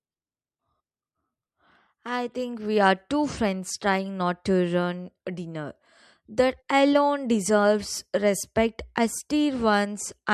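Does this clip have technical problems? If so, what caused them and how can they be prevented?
No, nothing in this speech recording stands out as a technical problem, so there's nothing here that needs preventing.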